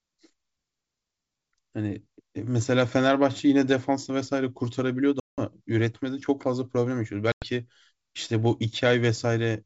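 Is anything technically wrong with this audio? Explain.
Yes. Packet loss on an ADPCM call cuts hard-edged silent holes at 5.20 to 5.40 s (about 180 ms of audio lost) and 7.32 to 7.47 s (100 ms). Unlike a simple dropout, the speech resumes at a wrong level or with a click and distortion, because the decoder's adaptive predictor and step size have drifted from the sender's. It settles within tens of milliseconds, under wideband G.722 coding.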